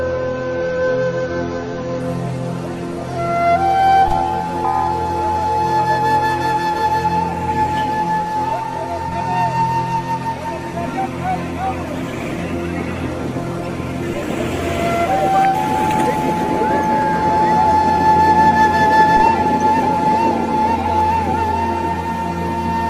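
Right from the start, up to about 2.0 s, you're hearing an adaptive stream starting at a low bitrate. The top end is simply gone, with nothing above roughly 6.9 kHz, and the coding artefacts are stronger, which fits an AAC-LC rendition around 24 kbit/s. The player went for that to get playback going fast, then switched up once it had gauged the connection. At 2.0 s the sound jumps cleanly to a fuller, brighter version, consistent with about 96 kbit/s, with no gap.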